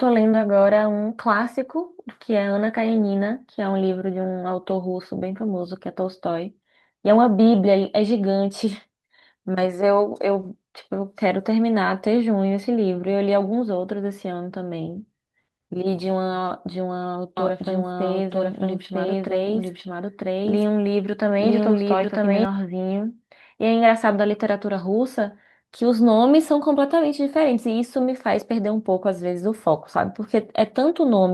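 Speech with two technical faults. At 4.69 s a lost packet rebuilt from error correction leaves a brief rough, noisy patch, consistent with one 20 ms frame, showing on a spectrogram as a thin smeared slice. From 17.37 to 22.45 s a doubled audio track plays an equally loud copy about one second behind, likely from a second, slower capture path; the waveform shows duplicated shapes that start and stop abruptly, without any reverb tail.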